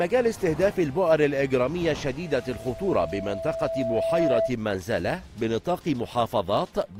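A loudspeaker feedback squeal runs from 2.22 to 4.56 s. A single 658 Hz tone swells over roughly two seconds until it sits about 5 dB above the audio, as the mic-to-speaker loop gain passes one at that frequency. Unlike a steady hum or test tone, it grows by itself before stopping. From 5.82 to 6.82 s, periodic USB or driver dropouts leave about five ticks spaced exactly 0.25 s apart. Each is a gap of around half a millisecond replaced by silence. Random crackle would fall irregularly, but this strict spacing points to a recurring task stalling the driver.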